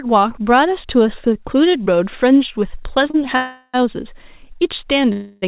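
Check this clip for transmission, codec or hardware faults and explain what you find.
The speech has three transmission faults, all of the jitter-buffer kind. The band stops at 4 kHz, which fits a narrowband call codec such as G.711.

At 3.10 to 3.27 s there is a short stall from a late packet. One packet arrived late, and the jitter buffer ran dry. The receiver stretched the last sound by about 33 ms to cover the wait. It then carried on from the same point. Nothing is lost. The sound is just held slightly too long, with a slight buzz or dip.

Two call audio freezes follow, at 3.36 to 3.83 s and 5.12 to 5.44 s. The likely cause is packets held up in transit, emptying the buffer. In the first, the receiver fills about 375 ms by extending the last sound into a fading buzz or hiss, ending in about 30 ms of silence. The second fills about 297 ms the same way, with no silent stretch. Each time the speech resumes where it stopped. 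Little is missing, but the gaps lengthen the audio.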